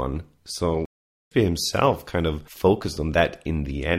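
At 0.85 s the player most likely ran short of buffered data or had its output thread held up, producing a playback stall. Nothing reached the output, so the speech cuts off abruptly mid-flow and a dead silence of about 0.46 s follows, lasting until 1.31 s. The gap does not sound like a natural pause but like the audio freezing. The speech then resumes with "himself kind of focused".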